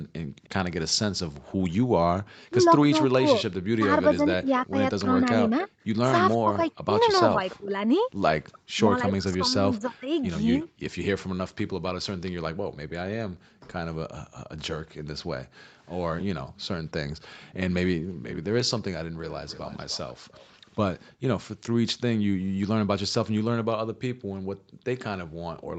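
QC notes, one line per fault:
0.03–0.37 s, 10.68–18.24 s and 22.37–25.79 s, background gated by the echo canceller: the room tone behind the speech sinks and briefly vanishes, then returns. It falls by about 18 dB in the first moment, about 40 dB in the middle stretch and about 30 dB at the end, with roughly a second of gaps in the last run. The echo canceller pulled the microphone level down hard while the far-end loudspeaker was active and released it once playback stopped.
0.12–0.49 s, 6.71–10.66 s and 15.58–21.15 s, echo leak: a faint, delayed second copy of the speech trails the original. It lags by 306 ms in the first and third spans and 290 ms in the second. It is very quiet at first, around 40 dB below the speech, then more noticeable at around 25 dB below. The likely cause is a loudspeaker on one side whose echo canceller failed to remove everything its microphone picked up, so the residue was sent back.
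2.47–10.08 s, speech suppressed in double talk: the talker's level dips sharply and drops out in pieces, totalling roughly two seconds. The deepest cut is around 35 dB. This is likely the echo canceller failing to separate its own talker from the loudspeaker echo when both sides spoke at once, so it turned both down together.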